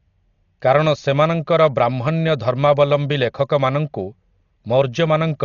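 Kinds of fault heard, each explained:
Dolby Digital compression: speech sounds dull and muffled, nothing above 7 kHz, with rough fluttering noise around tones; likely a low bitrate, around 40 kbps, leaving many frequency lines filled with dither noise.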